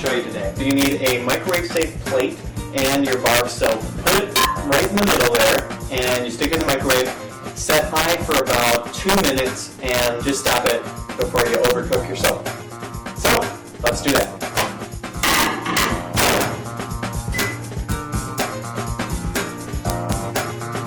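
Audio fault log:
Throughout, integer overflow: loud peaks pushed about 1 dB past the integer limit wrap to the opposite sign instead of being held at full scale, so each one snaps across the whole range. Under one percent of samples are affected, but each produces a sharp, violent crack.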